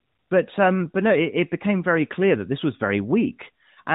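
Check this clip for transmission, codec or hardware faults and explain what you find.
Nothing to report; the AMR-NB narrowband path is working as designed, band-limited below 4 kHz and consistent with the 12.2 kbps mode.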